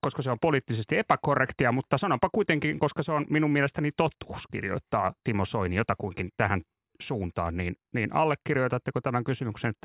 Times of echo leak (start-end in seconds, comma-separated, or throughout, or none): none